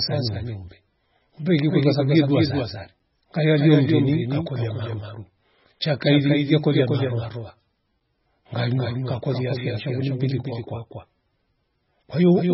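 Throughout the speech, a doubled audio track is heard: a second full-band copy, about 5 dB quieter, follows roughly a fifth of a second behind, likely from a slower duplicate capture path. Heavy MP3 compression is also present throughout, with nothing above 5.6 kHz and a watery, swirling texture that points to a very low bitrate, likely around 16 kbps. At 2.99 s, between "kweru kwasabu yedua sari" and "ngaya lio mndeni", and again at 8.00 s, just before "ngaluwa ngakolia fia nsha", a gap between chunks cuts in as a hard-edged 7 ms hole, spaced 5 s apart as the chunks join.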